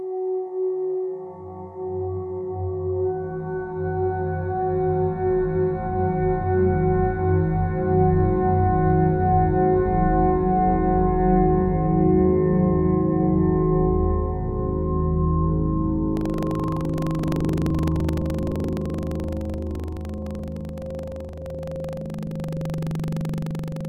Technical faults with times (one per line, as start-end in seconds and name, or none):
16.13-23.89 buffer tearing